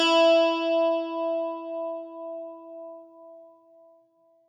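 Nothing here calls for comment, since the audio runs without any technical fault showing up anywhere along the way.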